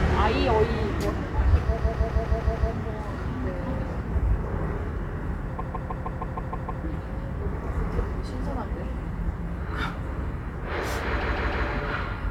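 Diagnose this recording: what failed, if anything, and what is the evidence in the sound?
Three stutters loop the same 157 ms block of sound: six extra plays from 1.77 to 2.71 s, eight from 5.58 to 6.83 s, and three from 11.20 to 11.67 s. This is repeated frames, a fault at the storage or transmission stage of the codec stream. A run of compressed frames, fitting about six frames per block, was written or sent more than once, so the decoder played it again. The clip runs longer by 0.94 s, 1.25 s and 0.47 s.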